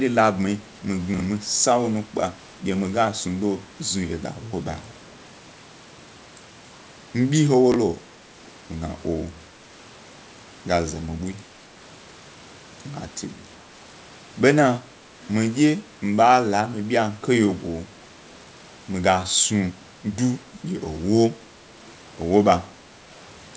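A speech clip carried over a call path that band-limits everything to 8 kHz, with two kinds of fault. In the first, chunks out of order, small blocks of audio, which fit 20 ms framing, were delivered late and played after the blocks meant to follow them. At 1.14 to 1.2 s a block lands two positions late, and at 7.72 to 7.76 s one lands a single position late. Each time the sound briefly jumbles, with hard joins. The second fault is most likely an echo leak: the far end's loudspeaker output reached its microphone and was not fully cancelled, so a copy returned about 386 ms behind the original. It appears from 4.75 to 5.18 s and again in a short scrap at 15.22 to 15.28 s as a faint, delayed trace of the speech, roughly 30 dB below it.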